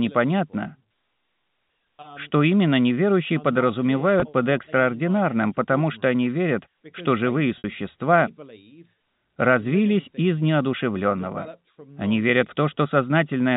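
At 4.20–4.22 s, just before "под экстраординарным потому что", there's packet loss with pitch repetition: about 20 ms went missing, and the receiver looped the last pitch period to cover it, so you get a brief buzzy hold. Then at 7.58–7.64 s, right after "они верят что живые", a longer 60 ms gap gets the same patch. This time the repeated cycle fades toward silence before the speech cross-fades back in, over the usual telephone-band G.711 sound.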